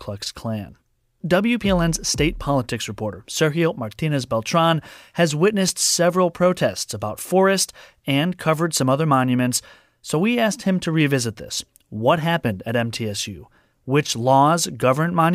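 Speech with three repeated-buffer glitches, at 1.65 s, 5.69 s and 10.86 s, where new audio arrived late and the last 5 ms chunk got replayed. They're so short they come across as tiny clicks or buzzes. The 5.69 one repeats twice, so it's a touch longer.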